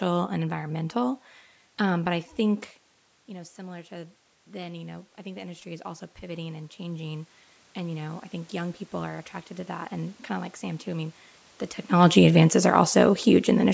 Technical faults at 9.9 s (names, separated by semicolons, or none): automatic gain rising